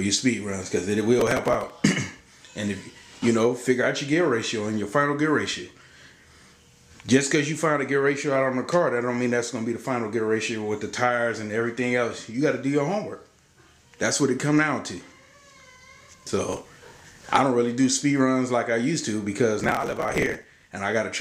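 Processor overload crackle shows up three times: 1.20 to 1.70 s, 16.53 to 17.25 s, and the longest at 19.60 to 20.73 s. The processor keeps missing its deadlines on very short buffers, a few milliseconds each, and skips them outright. That leaves dozens of tiny hard-edged gaps, well over a hundred in the last stretch. You hear a gritty, tearing crackle riding on the sound, and it clears once the load drops.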